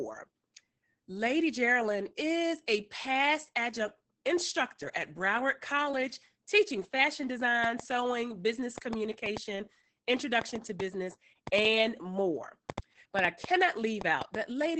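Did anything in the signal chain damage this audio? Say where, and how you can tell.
Yes, Opus voice compression at the codec stage crushed the whole clip: muffled, hoarse, slightly robotic speech topped near 8 kHz, which fits SILK at about 10 kbps.

A train of clicks, likely from interference or a faulty connection, runs from 7.64 to 14.36 s: around twenty irregular pops, 2.83 per second, about 10 dB above the speech.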